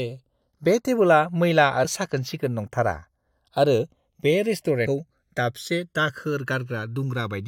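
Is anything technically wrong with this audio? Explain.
Yes, the speech has two faults.

Channels drifting apart runs throughout. The two channels run on clocks roughly 150 ppm apart, so their offset grows to under a millisecond. Summed to mono, the comb notches sweep slowly, heard as slow flanging and seen on a spectrogram as drifting dark diagonal bands.

Compressed frames skipped occurs at 1.84 s and 4.86 s. The playback jumps ahead by whole 23.2 ms frames, about 70 ms and about 150 ms of speech.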